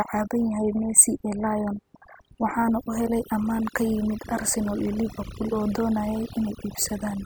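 From start to finish the speech carries overdone noise removal: the noise reducer was pushed so hard that it drops individual frequency bands whenever they sit near its noise estimate. The background collapses into near-silence with little twinkling specks, and quiet parts of the voice are dropped along with it.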